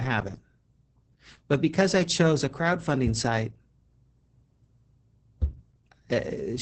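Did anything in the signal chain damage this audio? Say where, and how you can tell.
Yes: the codec stage. Throughout the speech, Opus voice compression in SILK mode leaves a hoarse, slightly robotic texture, consistent with roughly 10 kbps. Coarsely coded excitation causes this. The damage is steady rather than intermittent dropouts, which rules out network packet loss.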